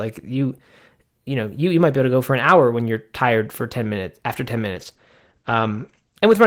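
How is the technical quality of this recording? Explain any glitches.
One fault is audible: a call bitrate drop near the end. From 4.73 to 6.25 s the encoder runs far leaner, which fits a fall from roughly 32 to 12 kbps, held lowest for about 1.5 s. Coarser coding and a bandwidth cut from 20 kHz to 8 kHz make the speech sound muffled and rough until the bitrate recovers.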